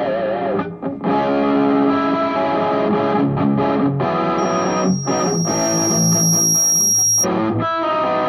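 At 4.38 s a loudspeaker feedback squeal starts: a thin tone around 5.6 kHz swells over roughly two seconds until it's about as loud as the sound itself. The mic is hearing its own speaker, and the loop runs away at that one frequency until it cuts off at 7.27 s.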